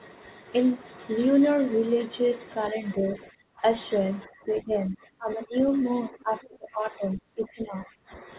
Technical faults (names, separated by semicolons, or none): speech suppressed in double talk